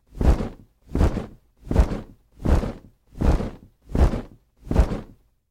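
No technical faults can be heard anywhere in the recording, and the signal stays intact and continuous throughout.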